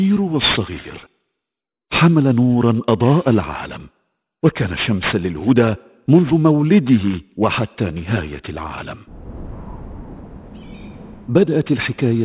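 Aliasing runs throughout the clip. Content above 4 kHz was folded back down rather than filtered out, which fits a drop to an 8 kHz sample rate without an anti-alias filter. The mirrored energy sits roughly 15 dB below the wanted sound, making high detail gritty and metallic.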